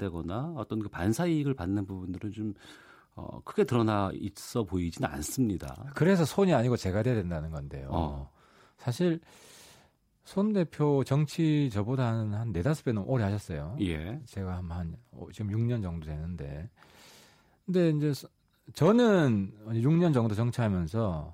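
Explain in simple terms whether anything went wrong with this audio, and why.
Nothing went wrong here: the recorded speech comes through steady and intact, with no sudden breaks, jumps or unwanted changes in the sound at any point.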